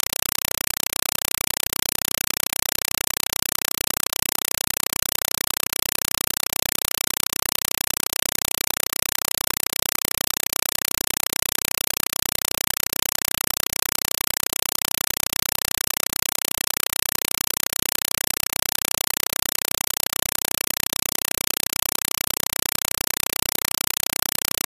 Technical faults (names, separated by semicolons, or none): compressed stream played as audio